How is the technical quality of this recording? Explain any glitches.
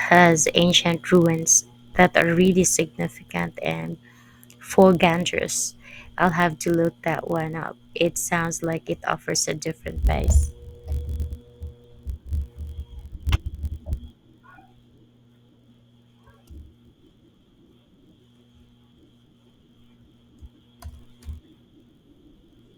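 The speech has a steady fault running the whole way through: a block size mismatch (padded). Each 1024-sample block gets a tiny zero-filled gap, giving a 46.9 Hz buzz, with timing slowed only negligibly, about 0.999 times normal speed.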